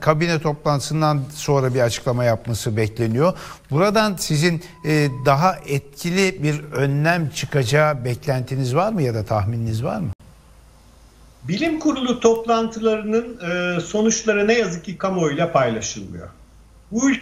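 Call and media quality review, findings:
Nothing stood out on listening; no findings to log for this clip.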